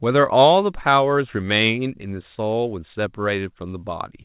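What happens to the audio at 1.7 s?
Nothing goes wrong at 1.7 s: the speech carries straight through that moment without any break, click or change in level.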